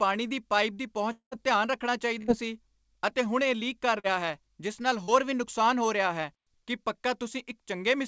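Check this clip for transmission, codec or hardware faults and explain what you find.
Yes, there are three kinds of transmission fault in this speech, all from lost network audio. The band stops at 8 kHz, which fits the G.722 call codec at 64 kbps that carries it.

Long network dropout, 1.12 to 1.33 s: After "ਦੀ ਪਾਈਪ ਦੀ", the last sound is stretched into a fading buzz or hiss, then about 100 ms of silence. Speech returns at "ਧਿਆਨ ਰੱਖਣਾ" with about 200 ms gone. The likely cause is that nothing arrived and the receiver extended what it had. On a spectrogram, the last sound freezes into steady streaks and then gives way to an empty column.

Burst of packet loss, 2.19 to 2.30 s: About 80 ms of audio failed to arrive, and the decoder held the last sound, turning it down as the gap went on. It is heard as a brief held sound that dies away before speech jumps ahead. On a waveform, the envelope decays smoothly and then steps abruptly into new material.

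Short concealed packet loss, 4.00 to 4.06 s and 5.04 to 5.10 s: At each point, about 40 ms never reached the decoder in time, and the receiver patched it by continuing the preceding sound before blending back. The first comes between "ਹੁਣ ਇਹ ਲੀਕ ਕਰ" and "ਹੈ ਜਿਸ ਨਾਲ", the second between "ਹੈ ਜਿਸ ਨਾਲ" and "ਵੀ ਨੁਕਸਾਨ ਹੋ ਰਿਹਾ". Each is heard as a quick smear or wobble. On a spectrogram, each shows as a narrow blurred patch where the detail goes briefly uniform.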